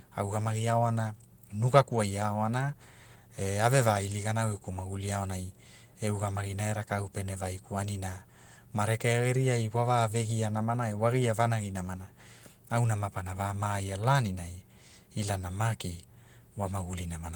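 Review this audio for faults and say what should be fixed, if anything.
No faults turned up in this audio, so nothing needs to be fixed.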